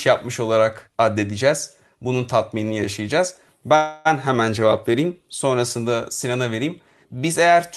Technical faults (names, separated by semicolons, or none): call audio freeze